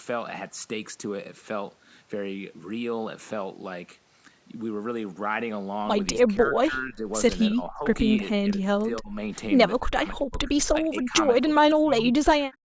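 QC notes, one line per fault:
6.24–7.06 s, 7.5–7.87 s, 8.18–9.17 s, 9.81–10.5 s, 10.7–11.19 s and 11.43–12.6 s: speech suppressed in double talk. The speech repeatedly sinks, thins or breaks into fragments, with dips from about 15 dB to as deep as about 40 dB around 8.2–9.2 s. The likely cause is the far end talking at the same moment. The echo canceller then mistakes the local talker for loudspeaker echo and attenuates the whole signal, not just the echo.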